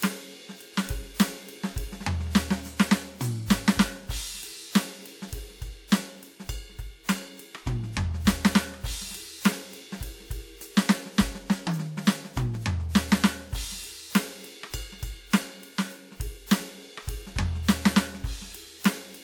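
Throughout the music, nothing is present above 18.4 kHz, and two unlike sets of artefacts sit together: the smeared, synthetic-sounding top typical of HE-AAC at a low rate, overlaid with WMA 1's own coarse coding. This is likely transcoding between lossy codecs, a 40 kbit/s HE-AAC stage feeding a 96 kbit/s WMA 1 encode, distinguishable from a single poor encode by the mixed artefact character.

At 9.44 s and again at 12.55 s, an underrun with held sample occurs: the output briefly ran dry and the converter froze on its last value for 1.33 ms, a 64-sample gap. Unlike a dropout to silence, the waveform flattens at the held value, and when playback resumes, about 1.5 ms of live audio has been skipped.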